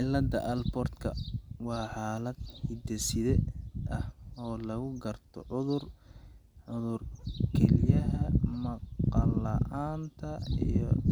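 Throughout the speech, a display or video cable is coupling into the audio path, producing video or display buzz. It sits at the 75 Hz field rate with a gritty hash above it, roughly 40 dB below the speech, a faint but constant drone under every phrase.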